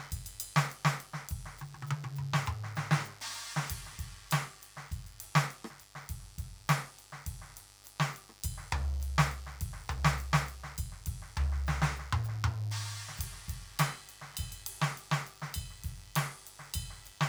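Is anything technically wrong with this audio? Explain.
Yes. A mains buzz runs under the music for the whole clip, sitting roughly 25 dB below it. Sharp switching spikes from something like a dimmer, a rectifier or an unshielded line get into the signal twice per 50 Hz cycle, piling harmonics of 50 Hz up into the kilohertz range. That is the difference from plain hum: hum is a smooth, dull tone at 50 or 100 Hz, while this is a steady, raspy buzz with a bright, edgy top.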